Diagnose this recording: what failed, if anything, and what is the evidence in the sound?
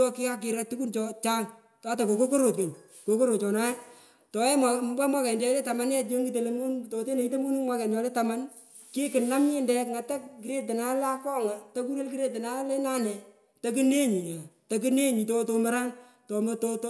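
Nothing failed in this recording, and the sound gives no evidence of any fault.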